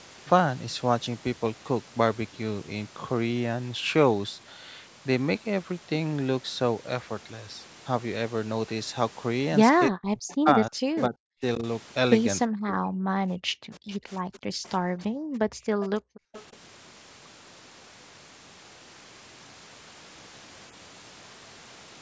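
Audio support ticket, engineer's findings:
Speech suppressed in double talk, 9.88–15.76 s. Talker level pumps down in pieces, deepest dip about 40 dB, about 3 s affected in total. Likely the echo canceller failing to separate near talker from loudspeaker echo while both sides spoke, so it attenuated everything.

Echo leak, delayed faint copy of the voice at 10.30–11.01 s (336 ms delay, about 15 dB below speech), 13.75–14.68 s (344 ms, about 25 dB below) and 15.83–16.56 s (348 ms, about 15 dB below). Likely residual loudspeaker pickup at the far end that the canceller didn't remove, returned to the line.

Background gated by the echo canceller. Room tone drops out briefly at 13.25–13.29 s (about 18 dB) and again at 15.81–16.33 s (about 40 dB, roughly 300 ms). The canceller is clamping the microphone hard during loudspeaker playback, then releasing.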